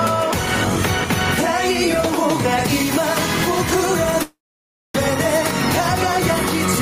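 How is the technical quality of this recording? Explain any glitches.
The recording has two clear problems: constant gain pumping and one long network dropout near the end.

The gain pumping runs through the whole clip, with the level swinging by around 5 dB. The likely cause is input gain set far too high, with a fast limiter or compressor grabbing every peak. Loud and soft parts end up squashed close together.

The long network dropout runs from 4.22 to 4.96 s. Audio stopped arriving, and the receiver papered over the gap by stretching the last sound into a fading buzz or hiss. That concealment covers about 730 ms, and roughly 600 ms of it decays into silence. When sound resumes, about 500 ms of the original is simply gone, and the timing shifts by something like a fifth of a second, which is most likely the jitter buffer resetting after the stall.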